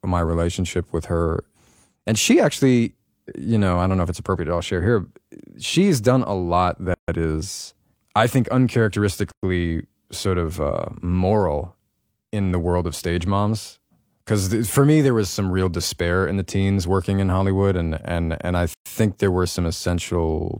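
A speech clip with three gaps at joins of encoded pieces. Silence cuts into the continuous speech at 6.94 to 7.08 s (142 ms), 9.32 to 9.43 s (110 ms) and 18.74 to 18.86 s (119 ms). Each gap has edges smeared by the codec. The speech then resumes where it stopped. The pieces were encoded separately and joined untrimmed. Each encoder's leading delay and padded final frame remain as dead air.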